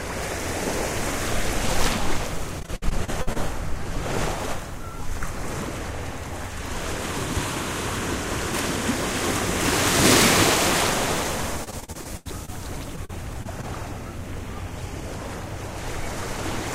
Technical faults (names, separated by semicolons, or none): repeated packet loss (robotic sound)